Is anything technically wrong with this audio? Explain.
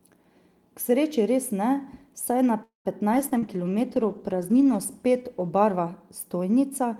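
Yes. There are three kinds of fault, all shortly after "res ne saj na".

From 2.63 to 2.88 s there is a call audio freeze. The last sound is stretched into a fading buzz or hiss, then about 130 ms of silence. This is likely packets stalling in transit so the jitter buffer ran dry. The receiver filled roughly 216 ms with its own sound. The speech then resumes where it stopped. Nothing is lost, but about 216 ms of delay has been added.

From 3.14 to 6.87 s there is a call bitrate drop. The encoder rate falls from 48 to 17 kbps. At its lowest it stays there for about 1.65 s. With so few bits, Opus codes the speech coarsely and trims the high frequencies. The voice turns muffled and watery. The upper detail in consonants thins out. The quality stays reduced until the rate climbs back near the end.

There are two short concealed packet losses, from 3.29 to 3.34 s and from 3.39 to 3.45 s. Each removes about 40 ms of real audio before it reaches the decoder. 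The receiver patches each hole by extending the preceding sound, then crossfades back. Here the patches were short, about 19 and 32 ms. Each one is heard as a brief smear or wobble inside the already degraded stretch.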